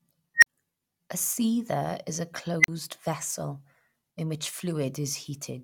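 At 0.36 and again at 2.60 s, an unstable filter makes a tone near 2 kHz swell to clipping within 62 and 41 ms, then cut to 40 ms of silence as the recursion overflows and resets. Unlike acoustic feedback, it ends abruptly in silence.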